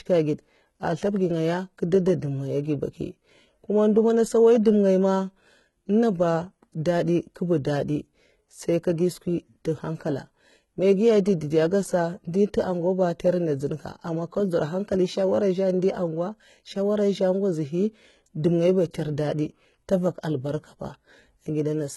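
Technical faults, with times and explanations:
Throughout, HE-AAC compression: s sounds come across gritty and metallic, and nothing is heard above 11.8 kHz. The likely cause is spectral band replication copying lower bands upward, so the rebuilt treble doesn't line up harmonically; damage this heavy fits a bitrate near 16 kbps.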